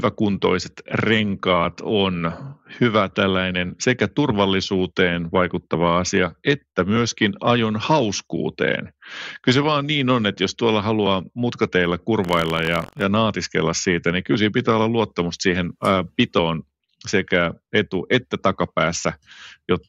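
From 12.22 to 13.05 s, after "jos tuolla haluaa mutkateilla" and before "naatiskella siitä niin kyllä", buffer tearing produces a robotic buzz at about 47 Hz, which fits a 1024-sample buffer. Writer and reader cross each period, splicing a small slice of audio from about 100 ms earlier between hard joins.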